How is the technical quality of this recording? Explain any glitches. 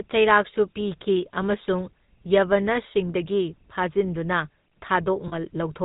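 The recording has clear technical damage. A codec sound runs through the whole clip, and there is one short glitch near the end.

GSM full-rate codec, throughout. The speech sounds buzzy and gravelly, and this is plainly audible. The codec models the vocal tract as a filter. It feeds that filter a sparse train of regular pulses instead of the real excitation. Nothing above 4 kHz survives. The result is dull and rough-edged, which fits the old 13 kbps full-rate GSM coder.

Lost GSM frames, 5.28 to 5.35 s. For about 70 ms the sound is held as a rough, metallic ring. Good data stopped arriving. The decoder repeated the settings of the last good frame at a falling level. About 40 ms of audio was missing, which fits two lost 20 ms frames. The gap was too short to fade fully to silence, so only a brief ringing smear can be heard.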